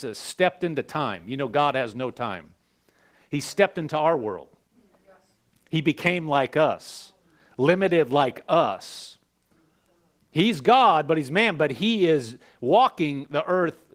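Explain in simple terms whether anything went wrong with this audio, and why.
Nothing went wrong here: the speech passed through Opus voice compression, which kept the full range of frequencies and worked as intended, and the signal shows no sign of a technical problem.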